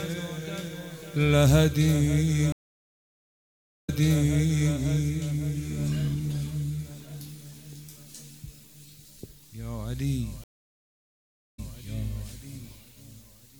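Stream reconnects at 2.52–4.74 s and 10.44–11.76 s: the connection dropped, leaving flat-line gaps of 1.3 s and 1.09 s. A fresh decoder then resumed 0.91 s and 0.24 s earlier, so sound repeats.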